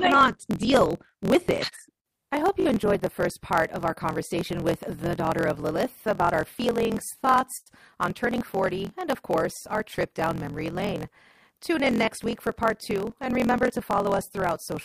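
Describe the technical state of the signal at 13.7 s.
A brief stutter lands at 13.68 s. A sliver of speech sounds twice in a row, with a hard join that comes across as a short click or buzz. This is a repeated buffer. New audio did not reach the output in time, so the device replayed its last block once more. The block length of about 21 ms fits a 1024-sample buffer, and roughly 20 ms of the real signal never gets played.

Underneath that moment, and across the whole recording, a steady buzz of about 43.1 Hz runs through the speech, which also moves about 1.12 times faster than natural while keeping roughly its normal pitch. This is a block size mismatch (truncated). One stage hands over blocks longer than the 1024 samples the next stage reads, and the tail of each block is dropped. The repeated cut at the block rate produces the buzz and shortens the timeline.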